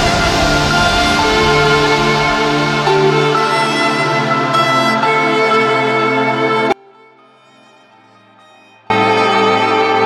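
The audio has an audio dropout to a faint residue from 6.72 s to 8.90 s: for about 2.18 s the sound collapses abruptly to a faint leak roughly 30 dB down, then returns just as suddenly. The likely cause is a brief loss of the main signal path while the line stayed live. On a waveform this shows as a sharp-edged, near-flat stretch, and on a spectrogram as a dim band with hard vertical edges.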